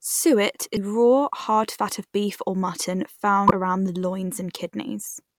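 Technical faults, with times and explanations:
0.73–0.77 s and 3.47–3.51 s, damaged data in a compressed stream: two brief glitches of about 40 ms each break into the speech. Corrupted bytes in the encoded stream make the decoder misread those frames and lose sync until it finds the next valid frame header.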